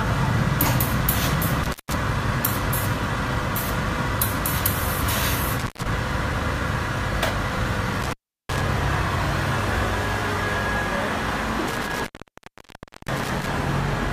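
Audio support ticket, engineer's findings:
Intermittent contact at 1.64–1.94 s, 5.59–5.87 s, 8.02–8.61 s, 11.67–13.47 s. Dropouts of 165 ms, 130 ms, 363 ms, 1.02 s with crackle at break edges, faint hiss in gaps. Loose cable or plug briefly opening the signal path.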